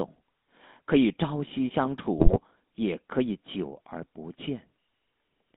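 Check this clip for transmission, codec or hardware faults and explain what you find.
Two faults are present: GSM full-rate coding throughout, and a short burst of GSM bit errors.

Throughout, the speech was squeezed through the GSM full-rate codec, which rebuilds the voice from a vocal-tract model driven by coarse, regularly spaced pulses. The rough, gravelly buzz fits the 13 kbps full-rate codec. The band runs only from about 200 Hz to 3.7 kHz, so it sounds thin and muffled.

From 2.18 to 2.37 s, GSM bit errors corrupted the decoder's filter, pitch and gain values across several consecutive frames, which points to an error rate of a few percent. The spectrum warps and the level jumps, breaking the speech into squawks, pops and gargling.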